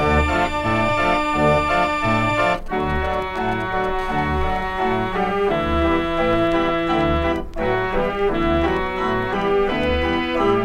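From 2.43 to 4.01 s a galloping dit-dit-dit of brief raspy buzzes breaks through, well below the main sound. These are GSM signalling bursts: a nearby 2G phone is sending short groups of transmissions at about 217 Hz, and the audio circuitry rectifies them into audible pulses.

From 4.01 to 6.48 s the bursts give way to a steady, hard, harmonic-rich buzz at 217 Hz, about 29 dB below the sound and unrelated to it. This GSM phone buzz comes from a phone in a call, transmitting in bursts 217 times a second, so the rectified pulses form a steady buzz.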